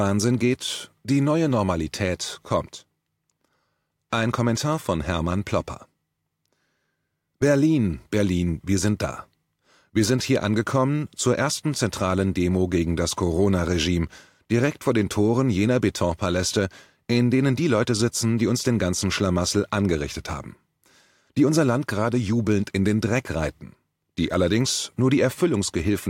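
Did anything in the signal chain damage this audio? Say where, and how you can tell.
No, no signal-chain damage here.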